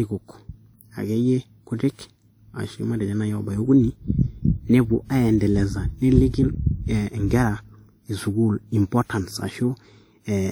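Throughout, the speech rings and sounds washy, with a hiss that breathes with the signal, likely from WMA compression at a setting that fits about 48 kbps. A spectrogram shows smeared, blurred energy around onsets and patchy gaps where weak components vanish, with content reaching 20.1 kHz.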